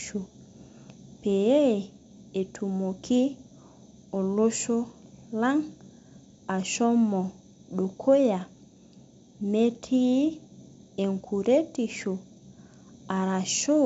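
Speech carried over G.722 wideband telephone coding at 64 kbit/s, band-limited at 7.7 kHz as that coder implies, with no faults to report.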